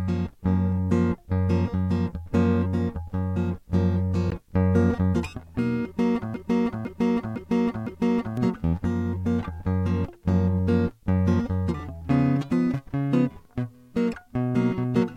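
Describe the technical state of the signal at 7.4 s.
At 7.4 s the music is caught in a broken-record loop, running from 6.34 s to 8.37 s. A 0.51 s fragment repeats exactly four times. A stalled player likely kept resending it, losing the intended audio.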